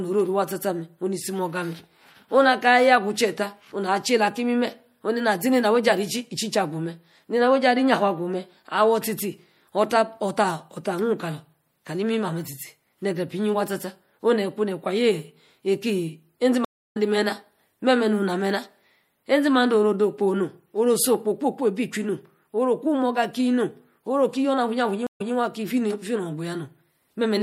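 The whole recording carries plainly audible MP3 compression damage. The speech has a watery, swirling texture, s sounds turn metallic and chirpy, and consonant attacks smear. The level of damage points to a low bitrate around 64 kbps, likely the cause, where the encoder runs short of bits, cuts the top end and lets weak frequency lines switch on and off from frame to frame.

At 16.65 s a stream reconnect interrupts playback. The connection drops, the player falls silent for about 0.31 s, then reconnects and starts a new decoder mid-stream. The sound resumes roughly 0.3 s further on than where it stopped, so a short stretch of the speech is simply missing across the gap ending at 16.97 s.

A second stream reconnect occurs at 25.07 s, with a shorter silence of about 0.13 s. This time the server resends from slightly behind the break point, so playback picks up 0.14 s earlier than where it cut out. 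A brief piece of the speech is heard twice as the audio restarts, with the whole event over by 25.34 s.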